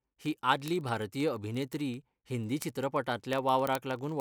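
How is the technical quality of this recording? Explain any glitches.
The recording has a clear technical fault. Word clock ticks run through almost the whole clip, from 0.10 s to 4.20 s. They come roughly every 30 ms. The receiving device ran on its own clock, about a tenth of a percent off the sender's. Each slip dropped or repeated one sample, so the speech carries a steady, sharp ticking of uneven strength.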